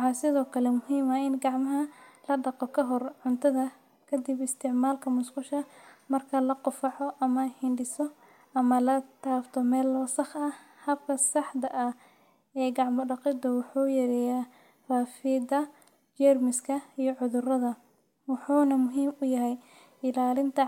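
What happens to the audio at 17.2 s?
Nothing goes wrong at 17.2 s; the speech carries on intact there, with no dropout, click, distortion or other fault at that moment.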